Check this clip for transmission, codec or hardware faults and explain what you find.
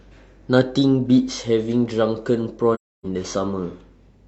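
One fault is present: AAC frame loss with muting, from 2.74 to 3.05 s. For about 0.3 s the speech drops to silence, which fits roughly seven consecutive lost frames. The decoder replaced the missing spectral data with zeros, and the overlapping transform windows fade the sound out and back in over about one frame, so the gap has softened edges. On a waveform the amplitude tapers to a flat line and back; a spectrogram shows a blank vertical band across all frequencies with smeared borders.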